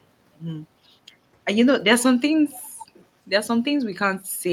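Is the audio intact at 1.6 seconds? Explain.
Yes, at 1.6 seconds the speech runs through cleanly, with no dropout, click, distortion or other break in the signal at that point.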